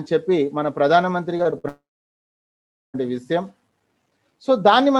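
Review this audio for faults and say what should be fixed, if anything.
From 1.37 to 1.66 s there is repeated packet loss, heard as choppy sound with pieces missing. Four short gaps, the longest 58 ms, are patched by extending the preceding sound, so about 37% of that stretch is filler. Unlike a dropout, real audio keeps returning between the holes. A deeper jitter buffer and forward error correction would prevent this.

From 1.68 to 2.96 s a long network dropout removes about 1.26 s of audio. The last sound is stretched briefly and then fades, leaving about 1.12 s of silence before the sound resumes past the lost part. The sustained silence distinguishes it from repeated loss. The likely cause is a connection interruption, so stabilising the network link or adding redundant transmission would prevent this.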